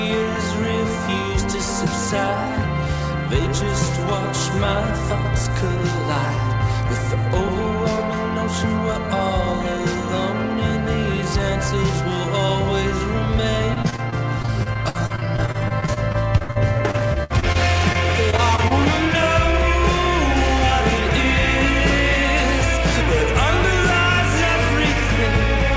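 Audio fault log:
13.74–17.57 s, repeated packet loss (robotic sound): about 30 dropouts in under 4 s, the longest around 63 ms, so roughly a fifth of that stretch is patched by stretching the last bit of audio, which gives the choppy feel with pieces missing.
17.93–18.72 s, repeated packet loss again: a lighter burst of 5 short gaps, none over 25 ms, so it's choppy but less severe. The G.722 call path tops out at 8 kHz.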